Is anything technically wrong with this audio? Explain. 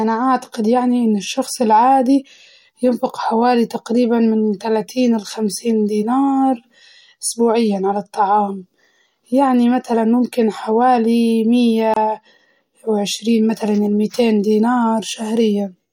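Yes. At 11.94 to 11.96 s there is a gap at a join of encoded pieces: separately encoded segments were butted together untrimmed, leaving encoder delay and end padding in place. The speech drops out for about 26 ms, with smeared edges, then resumes where it stopped.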